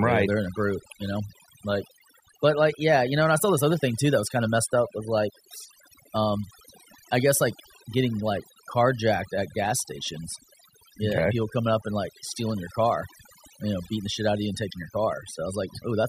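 A speech recording with near-silent gaps sprinkled with twinkling specks throughout points to overdone noise removal: a noise reducer set far too hard, cutting frequency bands near its noise estimate and taking the quieter parts of the speech along.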